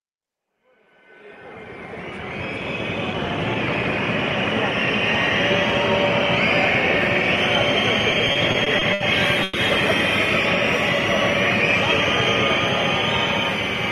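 From 8.11 to 9.01 s the sound suffers repeated stalls, a stutter. Playback halts eight times in under a second. Each halt is bridged by stretching the last bit of sound, so nothing is lost. The bridged time adds up to 190 ms, about a fifth of that stretch. The longest single hold is 70 ms. Packets were reaching the receiver late, and its jitter buffer kept running dry. The result drags and judders.

At 9.43 s comes a brief call audio freeze, lasting until 9.55 s. For 110 ms the last sound is held and carried on, fading as it goes. It never drops to silence. Then the sound resumes where it left off, 110 ms later than before. Nothing is skipped; a gap has simply been inserted. The likely cause is packets held up in transit, leaving the buffer empty.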